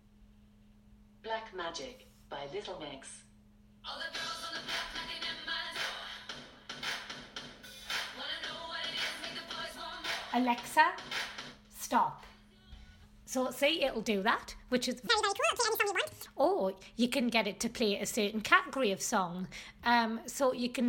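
A section at the wrong speed runs from 15.07 to 16.26 s, where the audio suddenly plays at twice its recorded rate, rising by about ten semitones and sounding hurried and high. This likely comes from an editor or player applying the wrong clock to that stretch.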